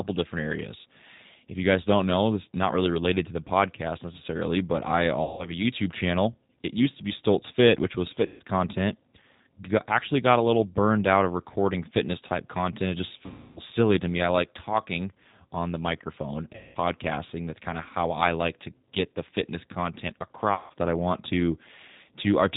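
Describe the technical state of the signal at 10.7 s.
At 10.7 s the speech sounds slightly rough and synthetic, with nothing above 4 kHz. That is G.729 codec damage, present throughout the clip. The low-rate coder, consistent with 8 kbit/s, rebuilds speech from a vocal tract filter, pitch prediction and a few pulses per frame.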